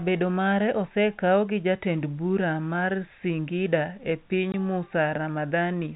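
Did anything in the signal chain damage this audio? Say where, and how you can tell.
Yes, at the network stage. Packet loss filled with silence cuts a hole from 4.52 to 4.54 s. The gap lasts 20 ms, which fits one lost 20 ms packet. The receiver played silence instead. Its hard edges cut sharply into the band-limited telephone-coded sound.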